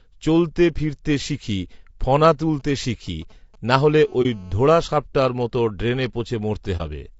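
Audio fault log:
throughout: low-delay AAC compression. The speech was likely coded with low-delay AAC at a low bitrate, around 32 kbps. Its short frames resolve pitch harmonics poorly and leave too few bits, so the speech sounds plainly rough and grainy, with noise filling the gaps between harmonics.
2.60–3.79 s: GSM signalling bursts. Just after "চলতে ফিরতে শিখি ফণা", a nearby 2G phone sends short groups of radio bursts while signalling. The audio circuitry rectifies them into a galloping dit-dit-dit of brief 217 Hz buzzes, roughly 30 dB below the speech.
3.87–4.79 s: GSM phone buzz. The phone is now in a call and transmits continuously at 217 bursts per second, which the circuit rectifies. This produces a steady, hard, raspy 217 Hz buzz rich in harmonics, about 32 dB below the speech, ending just before "সাপটার মত ড্রেনে".
4.22–4.26 s and 6.77–6.82 s: AAC frame loss with muting. In each place a single frame of about 30 ms was lost, and the decoder zeroed its spectrum. 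The overlapping windows fade the sound out and back in, leaving a brief dip.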